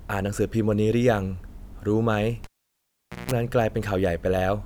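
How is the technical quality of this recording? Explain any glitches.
The recording has one clear glitch, a cable pulled and plugged in, running from 2.44 to 3.31 s. A sharp pop cuts the speech, the signal drops to near silence for about 0.82 s, during which a 60 Hz mains buzz lasts about 0.17 s, before a second pop brings the sound back. The live connector was pulled out and reinserted. While only its tip touched, the unshielded contact picked up hum.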